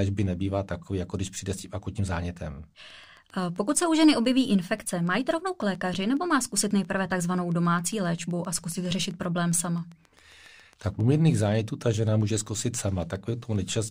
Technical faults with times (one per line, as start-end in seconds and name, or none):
2.90-13.84 train of clicks